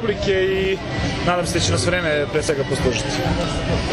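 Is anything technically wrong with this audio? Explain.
Yes, there are three spots where the sound jumps: at 0.65, 2.49 and 3.44 seconds. Each is a small skip forward, with no gap of silence. That's most likely a dropped buffer (overrun): the capture side didn't collect its samples in time, the hardware wrote over them, and the audio on either side got butted straight together. Roughly 20 ms vanishes each time, which is why you hear the jump.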